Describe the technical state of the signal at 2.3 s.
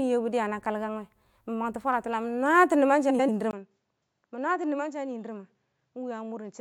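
At 2.3 s the speech signal is intact, with no audible fault at that moment.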